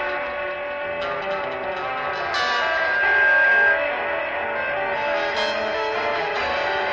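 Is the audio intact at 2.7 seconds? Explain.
No. A single 1.6 kHz tone swells over about a second and a half into a loud squeal from 1.70 to 3.88 s: loudspeaker feedback squeal, where the microphone re-amplifies its own loudspeaker.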